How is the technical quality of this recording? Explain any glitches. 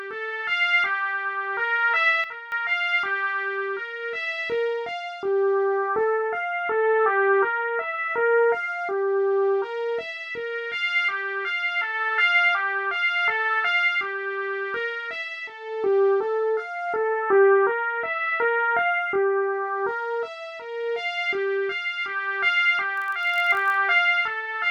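Two glitches stand out, one near the start and one near the end.

From 2.24 to 2.52 s there is a sudden gain jump. The level drops by about 12 dB in a single step, and the background noise falls with it, so the change is clearly a gain change and not something in the source. It is likely a gain setting or bit shift applied instantly with no ramp, and the abrupt step can produce a click at the transition. The level recovers at 2.52 s.

From 22.95 to 23.77 s there is a block size mismatch, with padding. A stage upstream delivers blocks shorter than the next stage reads, and the shortfall in each block is filled with zeros. That inserts a tiny silent gap in every block, heard as a buzz at 46.9 Hz, which fits a 1024-sample read block. The inserted gaps stretch the audio only slightly, to 0.999 times normal speed, so the pitch stays essentially unchanged.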